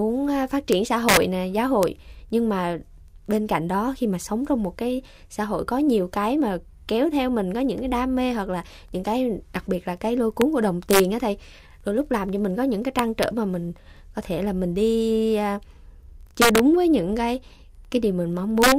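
Speech with integer overflow: loud peaks wrap to the opposite sign instead of limiting, giving harsh cracks at 0.73, 1.09–1.17, 1.83, 10.42, 10.91–11.00, 12.99–13.23, 16.42–16.59 and 18.62–18.72 s.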